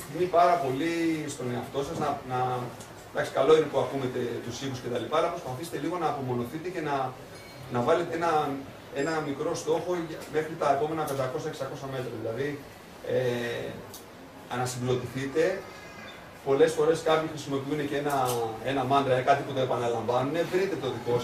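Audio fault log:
No fault can be heard anywhere in the clip. Nothing in the sound calls for an entry in this log.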